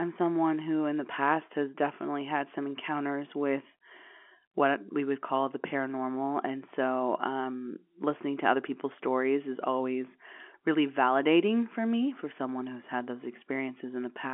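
No technical fault can be heard: the speech carries the narrow telephone band of G.711 coding, roughly 250 Hz to 3.4 kHz with nothing above 3.8 kHz, which fits a 64 kbps mu-law line.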